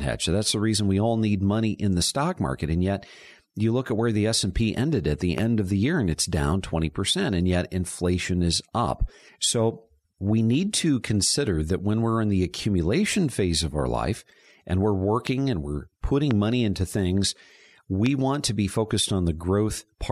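Four loud pops cut through the speech, at 5.38, 15.27, 16.31 and 18.06 seconds, each a single sharp click lasting about 20 ms and peaking roughly 15 dB above the talker. The second lands just before "and we're", the third right after it and before "money into things", and the last just ahead of "want to be". The speech runs on underneath each one. A brief voltage spike, likely from a plug, switch, static or driver glitch, gets added to the signal and comes out as a sharp thump.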